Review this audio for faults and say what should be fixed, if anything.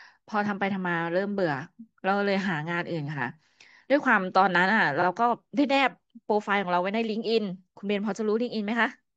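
Repeated frames at 5.01 to 5.06 s: a 42.7 ms block of this speech, which fits two compressed frames, plays a second time, causing a brief stutter and adding 42.7 ms. On a spectrogram, two identical slices sit side by side. Fix it by de-duplicating frames using sequence numbers or timestamps before decoding, and by checking the writer or transport for retransmitted data.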